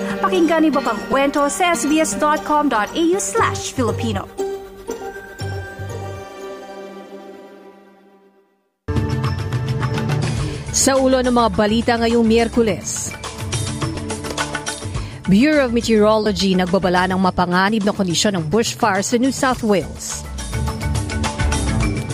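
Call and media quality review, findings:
Lost LE Audio frames. Short noisy smears at 1.12 s, 13.95 s and 16.24 to 16.26 s, lasting 7.5, 15 and 22.5 ms. LC3 concealment replays the last spectrum with random signs. Lengths fit one, two and three 7.5 ms frames.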